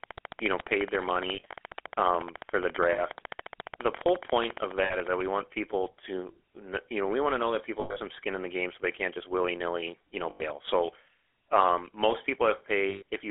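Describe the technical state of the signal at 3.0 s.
Lost GSM frames from 2.92 to 3.03 s: for about 60 ms, which fits three dropped 20 ms frames, the decoder had no valid data and reused the settings of the last good frame. Instead of a clean gap, the sound is held as a short, rough, metallic ring, too brief to fade fully to silence before normal decoding resumes.

A train of clicks runs from 0.04 to 5.22 s, so it is present at this moment too. The pulses come at a steady 14.3 per second, about seventy in all, each much the same shape and peaking around 10 dB above the signal. The result is an even ticking laid over the sound and through its pauses, ending just before "want people to you". The likely cause is interference from nearby equipment or a faulty connection or power supply.

The GSM full-rate codec shapes the whole clip at 13 kbps. It models the vocal tract and drives it with a sparse, regularly spaced pulse excitation, and the line band is confined to roughly 300 Hz to 3.5 kHz. 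The damage is plainly audible: the speech has a buzzy, gravelly roughness and a narrow, boxy tone with no high-frequency air, and the ringing frame loss at 3.0 s sits on top of that coarseness.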